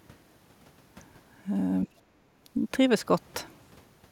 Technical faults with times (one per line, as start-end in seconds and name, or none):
1.87-1.96 speech suppressed in double talk